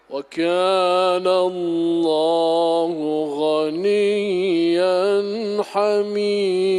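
No technical faults can be heard anywhere in this audio. There is nothing to point to at any moment in the recording.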